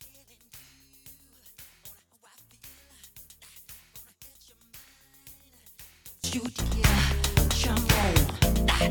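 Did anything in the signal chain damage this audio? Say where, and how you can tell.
Yes. From 0 to 6.24 s the mono sum drops by about 28 dB, leaving a faint residue, which is the mark of one channel inverted, likely from a swapped wire in an analogue cable. The summed spectrogram is nearly empty.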